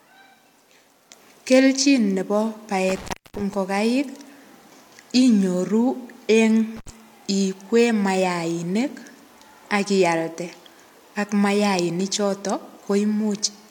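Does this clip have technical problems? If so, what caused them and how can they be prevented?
Yes. An intermittent contact, a loose cable or plug briefly opening, drops the speech from 2.89 to 3.54 s (a 276 ms gap) and from 6.77 to 6.89 s (67 ms), with crackle at each edge and faint hiss in between. Seating plugs firmly and replacing worn cables prevents it.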